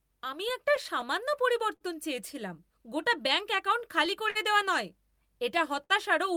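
Clock drift between sender and receiver runs through the whole speech clip. The sender's clock is roughly 4 percent slow, so the receiver's buffer keeps draining and small timing hiccups recur unevenly.

From 0.04 to 5.73 s, repeated timing corrections stretch the audio to 99 percent speed, adding around 70 ms overall. These are heard as a slightly unsteady tempo, and on a waveform they show as faint repeated slivers at irregular spacing.

Between 0.24 and 1.04 s, scattered short gaps appear: about four holes, each patched by continuing the last sound, totalling roughly 30 ms. On a spectrogram they show as tiny smeared columns, heard as brief ticks.

At 1.76 to 1.82 s, a short stall from a late packet holds the sound for 46 ms. This is heard as a slight drag or buzz, and a spectrogram shows flat, horizontally smeared harmonics.

From 3.55 to 4.37 s, repeated stalls (stutter) fill four gaps totalling 66 ms, the longest 48 ms, about 8 percent of the span. 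The speech drags and stutters, and the waveform shows repeated held segments with fading envelopes.

At 5.84 to 5.92 s, another short stall from a late packet stretches the sound for 55 ms. The spectrogram shows frozen, streaked partials with a slight level dip, heard as a held sound.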